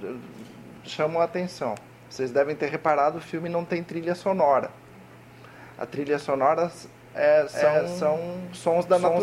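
From 7.52 s to the end, a doubled audio track appears. A second full-band copy trails by about 400 ms at similar level, starting abruptly. Likely cause: a slower capture path.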